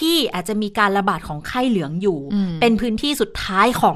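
Speech throughout sounds dull, gurgling and granular as upper bands flicker in and out, likely MP2 compression at about 80 kbps, unlike a plain low-pass, which stays steady.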